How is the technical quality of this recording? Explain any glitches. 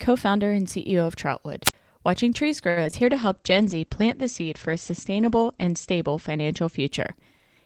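The recording has several clear glitches clustered in the first half, followed by a long stretch of degraded, lower-fidelity sound.

At 1.64 to 1.74 s there is a wireless microphone squelch dropout: hiss swells, then about 47 ms of near silence before the speech returns. The transmitter's signal faded until the receiver's squelch muted its output.

From 2.69 to 2.78 s a sound is held unnaturally for 70 ms. This is a short stall from a late packet. The jitter buffer ran dry and the receiver stretched the last audio until the packet arrived, so nothing was lost but timing slipped by 70 ms.

Two brief smears follow at 2.84 s and 2.91 s, each a quick wobble where roughly 20 ms of audio is gone. These are short concealed packet losses, where the decoder papered over each missing slice by extrapolating the preceding sound before blending back in.

From 3.06 to 6.96 s the speech turns muffled and watery, with the top end cut off around 8 kHz instead of reaching 20 kHz, and it is coarsest for about 2.7 s. 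This is a call bitrate drop, likely a fall from about 32 to 12 kbps. The encoder was forced to code more coarsely and narrow its bandwidth until the estimate recovered.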